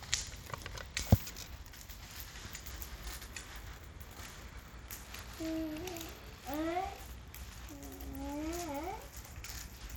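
From start to end the treble flickers and drops away under a gritty, aliased haze, likely Bluetooth SBC compression at a starved bit pool, consistent with about 96 kbps.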